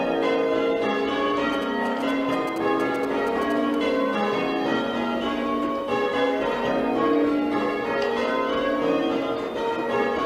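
From 1.53 s to 3.75 s, GSM signalling bursts break in: a galloping dit-dit-dit of short buzzes sitting roughly 15 dB below the main sound. A nearby 2G phone is sending brief groups of radio bursts to the network, and the audio circuit rectifies them into sound. The buzz repeats at 216.7 Hz, the GSM frame rate. Unlike steady mains hum or the continuous buzz of an active call, it comes in clustered, stop-start bursts.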